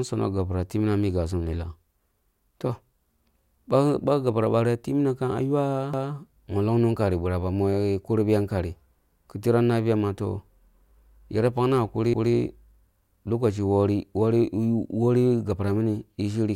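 Overlapping chunks show up at 5.94 s and again at 12.14 s. The speech seems to have been handled in 6-second blocks, and each new block starts before the previous one finishes. So a 200 ms stretch plays twice at both joins, from 5.94 to 6.14 s and from 12.14 to 12.34 s. You hear a brief stutter each time, with the sound jumping back a fifth of a second and repeating, 6.2 seconds apart.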